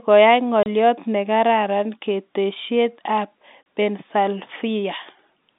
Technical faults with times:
0.63-0.66 packet loss filled with silence
3.63-3.66 packet loss filled with silence

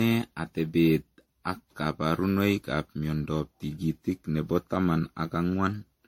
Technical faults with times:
0.00-6.08 generation loss

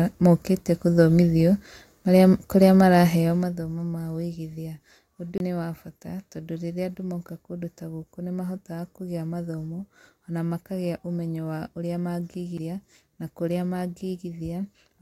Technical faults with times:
5.38-5.40 CD skip
12.58 CD skip

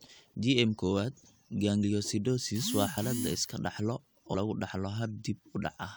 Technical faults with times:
1.82 compressed frames skipped
2.96 compressed frames skipped
4.33 compressed frames skipped

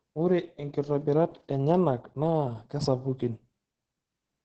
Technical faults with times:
0.00-4.45 Opus voice compression

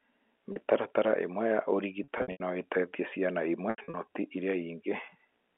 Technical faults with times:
0.52-0.56 packet loss with pitch repetition
2.04-2.40 packet loss with pitch repetition
3.70-3.94 packet loss with pitch repetition

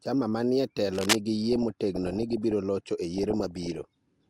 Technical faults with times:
0.93-1.16 cable scratch noise
1.52-2.52 DAB burbling
3.14-3.84 DAB burbling

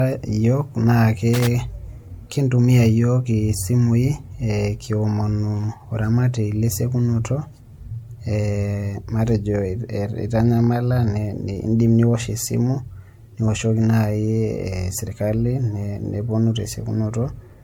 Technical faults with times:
0.00-17.64 generation loss
1.34-1.47 loose connector crackle

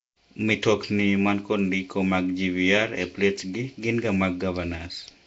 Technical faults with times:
0.00-5.27 Nellymoser compression

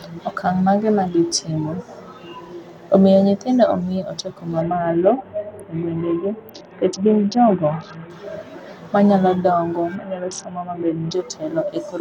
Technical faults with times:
4.61-8.10 Bluetooth SBC bit pool drop
9.95-11.13 Bluetooth SBC bit pool drop

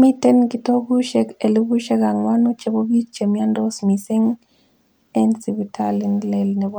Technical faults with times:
none

